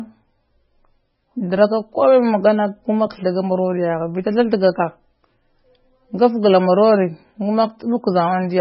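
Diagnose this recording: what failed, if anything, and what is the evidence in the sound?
Codec stage: the speech has nothing above 5.5 kHz and sounds watery throughout, likely heavy MP3 compression, fitting a starved 16 kbps stream.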